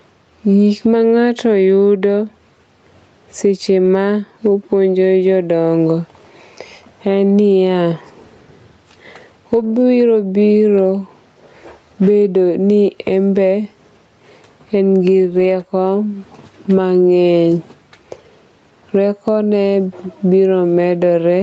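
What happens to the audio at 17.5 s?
At 17.51 to 17.53 s there is a lost packet rebuilt from error correction. One 20 ms packet went missing, and the decoder filled it with the low-bitrate copy that Opus carried inside the following packet. The result is a single frame that sounds briefly rougher and noisier, with no silence, click or smeared repeat. That seamless texture change is what sets it apart from packet-loss concealment, which guesses the missing audio and tends to buzz or stretch, and from a plain dropout, which leaves a gap. Because the call is limited to 8 kHz, there is no extra top-end dip at that spot.

The moment also carries the gain pumping heard throughout: the gain swings by roughly 15 dB, pulling loud and soft parts closer in level and leaving the sound squashed. This is likely caused by gain set far too high into a fast limiter or compressor. Unlike a noise gate, it never cuts the background off. 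It only pulls the gain down on each loud sound.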